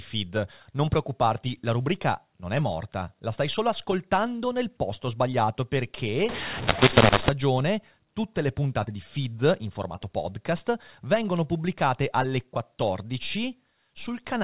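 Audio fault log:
6.29–7.29 s, mu-law and A-law mixed up: for one second the telephone-band speech, A-law G.711 coded elsewhere in the clip, is decoded with the mu-law curve instead. The two logarithmic tables don't match, so each 8-bit code expands to the wrong amplitude. Some samples come out too loud, others too soft, and near-silent codes land well above zero. The speech turns harsh and gritty, and gaps fill with hiss until correct decoding returns.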